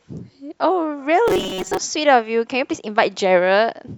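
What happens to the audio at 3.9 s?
Nothing goes wrong at 3.9 s; the speech carries on cleanly through that moment with no dropout, click or distortion.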